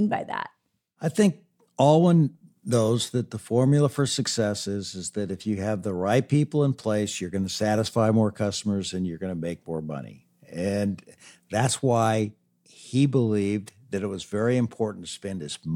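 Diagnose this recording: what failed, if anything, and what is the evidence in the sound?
A brief garbled flicker at 7.13 to 7.15 s, between "the right people in" and "you're going to satisfy": chunks out of order at the driver or buffer stage. One 10 ms chunk was written a chunk late and plays after its successor. Nothing is missing, but the swap creates three hard joins.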